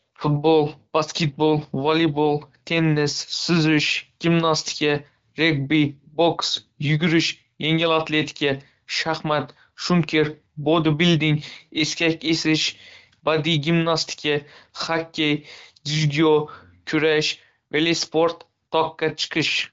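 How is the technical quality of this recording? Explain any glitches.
Nothing stood out on listening to this speech recording, and its wideband HD Voice coding at 12.65 kbit/s leaves it sounding clear.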